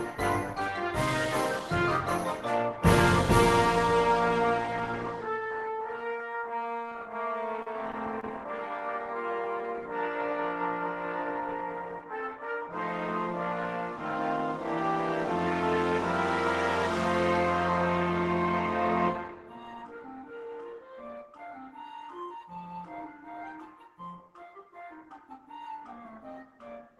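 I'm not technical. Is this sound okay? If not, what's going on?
No. From 7.62 to 8.30 s there are repeated stalls (stutter): the audio catches four times in quick succession, dragging for an instant each time, the longest catch only about 39 ms. The audio was arriving too slowly over the call connection, so the receiver briefly stretched the last bit of sound to fill each wait. Unlike a dropout, nothing is actually lost. The sound just hiccups and drags before carrying on.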